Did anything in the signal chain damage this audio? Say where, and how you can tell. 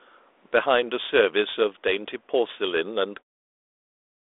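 No, nothing in the chain has damaged this audio. The speech comes through a telephone band of about 300 Hz to 3.6 kHz via 32 kbit/s G.726 ADPCM with only a light coding texture, and it fades out smoothly from around 3 s, ending at 3.24 s.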